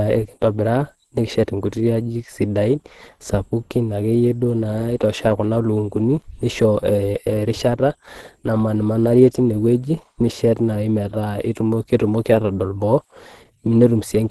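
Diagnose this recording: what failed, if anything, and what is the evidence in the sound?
Opus compression runs throughout this speech, with plainly audible codec damage and nothing above about 12.2 kHz. The muffled, hoarse texture is likely the codec's hybrid speech mode at a low bitrate, near 16 kbps, where the encoder narrows the band and coarsens the remaining detail.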